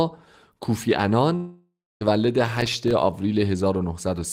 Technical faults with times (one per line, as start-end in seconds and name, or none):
1.35-2.03 long network dropout
2.57-2.91 processor overload crackle